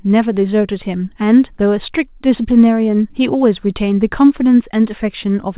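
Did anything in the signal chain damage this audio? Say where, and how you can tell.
No, nothing in the chain damaged this speech.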